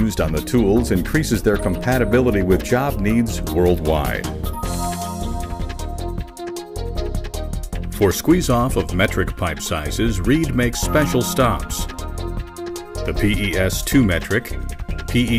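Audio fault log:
No faults detected: no dropouts, glitches or level anomalies anywhere in the clip.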